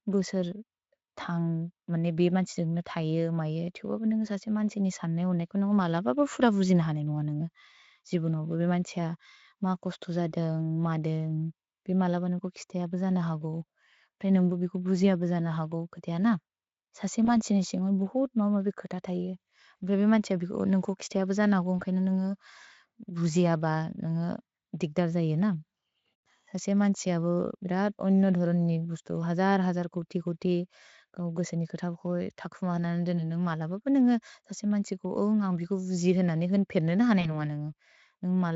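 Speech carried over a Speex link shows VoIP packet loss concealed by the speech codec at 17.25–17.35 s, 21.79–21.84 s and 37.21–37.36 s. Rather than a silent gap, each lost 20 ms frame (two in a row, 40 ms, at 37.21 s) becomes a fading, buzzy or noisy smear, and the voice stays weak briefly after packets resume.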